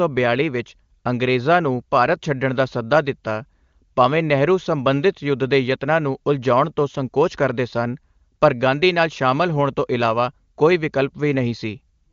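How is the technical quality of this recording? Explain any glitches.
Nothing stood out as a glitch or technical fault on listening to this speech recording.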